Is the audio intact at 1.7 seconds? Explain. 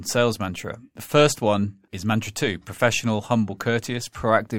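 Yes, the speech at 1.7 s is intact, with no dropout, click, distortion or other fault at that moment.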